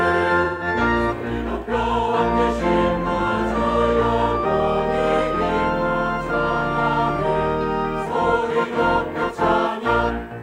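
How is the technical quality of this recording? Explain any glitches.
Two glitches stand out, both AAC frame loss with concealment. From 0.43 to 0.67 s the audio turns smeared and noisy, and a briefer phasey blur follows at 8.71 to 8.77 s. In each gap the decoder rebuilt missing frames from the last good spectrum. The first gap of about 170 ms fits four consecutive lost frames, the second a single one.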